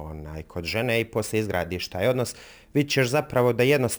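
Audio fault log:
throughout: crude rate conversion. The speech has been resampled up by a ratio of about 1.38 using nearest-sample picking, which fits a 32 kHz to 44.1 kHz change. Duplicated samples create a patterned error roughly 20 dB below the speech, heard as gritty, inharmonic fizz.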